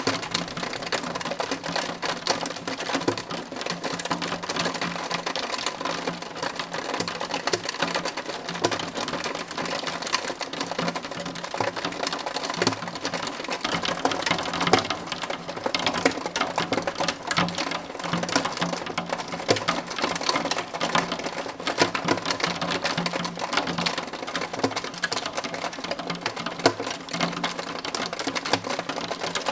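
No technical faults can be heard anywhere in the clip.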